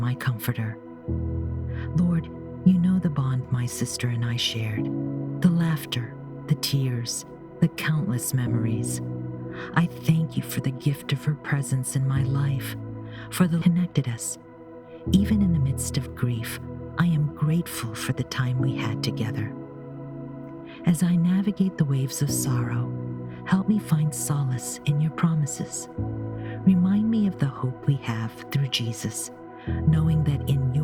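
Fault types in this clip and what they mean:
Skip ahead: At 13.61 s playback jumps forward with no gap, and roughly 0.7 s of audio is simply missing. On a waveform the envelope changes abruptly at one point with no silence, and the spectrogram shows mismatched patterns butted directly together.
Jitter buffer speed-up: From 13.71 to 16.33 s (111% speed, about 0.3 s trimmed) and from 17.00 to 17.27 s (113%), short pitch-period pieces are removed, so the sound runs faster at unchanged pitch. The spectrogram is horizontally compressed, with harmonics at the same heights.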